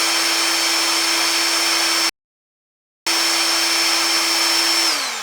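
A recording of sounds plays normally until 2.09 s, then drops abruptly into silence that holds until 3.07 s, after which the audio picks up at exactly the point it left off, with nothing skipped. That gap is a rebuffering stall: the player exhausted its downloaded audio and paused until more data arrived. No material is lost, but the pause stretches the playback by about 0.97 s.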